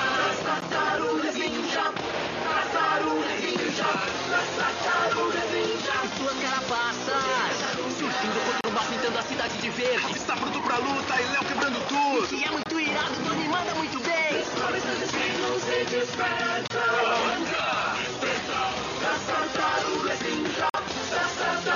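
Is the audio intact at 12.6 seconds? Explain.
No. A gap between stream segments opens from 12.63 to 12.66 s. Two segments' timestamps fail to meet, which fits 4-second segments, and the player fills the 24 ms hole with silence. The result is a hard-edged dropout, with no audio lost.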